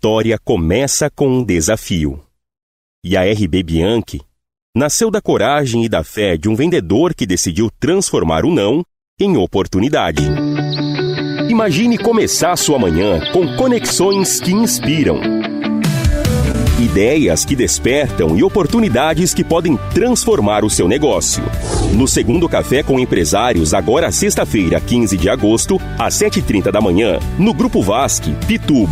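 You'll catch short concealed packet loss six times: 1.41–1.44, 6.16, 11.06–11.08, 13.87–13.91, 16.51–16.55 and 22.31–22.34 s. Each time, 10 to 40 ms of audio arrived too late, and the receiver patched it by extending the preceding sound, leaving a quick smear or wobble.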